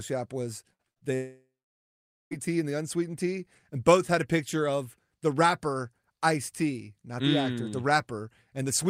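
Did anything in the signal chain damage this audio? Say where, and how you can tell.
Yes, network damage. A burst of packet loss at 0.73–0.81 s and 0.91–0.98 s, each about 60 ms missing, gives a held, fading buzz or hiss.

Short concealed packet loss at 0.98–1.03 s drops about 40 ms. The receiver patched it from the last sound, leaving a brief smear and a blurred spectrogram patch.

From 1.15 to 2.33 s, after "was they", the sound turns to a fading buzz or hiss and then about 0.84 s of flat silence before "tea and the unsweetened" resumes. This is likely a long network dropout.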